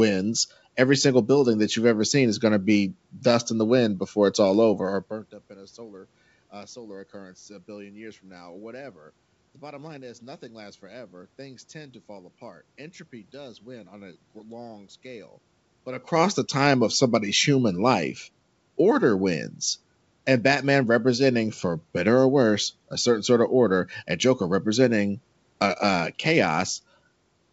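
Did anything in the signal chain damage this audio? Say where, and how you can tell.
No, nothing in the signal chain damaged this speech. The content stops at about 8 kHz, which fits a wideband call path such as G.722 at 64 kbps, and under it sit room noise and level shifts around 5 s and 15.5 s that come from the talker moving, not from the system.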